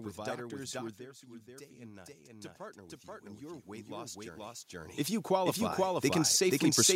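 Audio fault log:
throughout doubled audio track: A second full-band copy of the speech runs about half a second behind the first. It is roughly as loud as the original and has no decay or room colour. A second capture path or misaligned edit is the likely cause.
0.97–6.91 s automatic gain rising: Just after "with doctors who are", the talker moves back and the input drops about 12 dB. The gain control slowly adds about 13 dB. Voice and room noise swell together across the rest of the clip.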